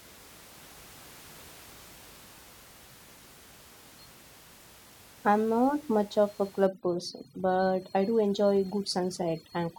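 Overdone noise removal runs from 6.67 s to the end, just after "not much of a". The noise reducer cuts individual frequency bands near its noise estimate too hard, so the room noise, about 25 dB below the speech, collapses into twinkling near-silence.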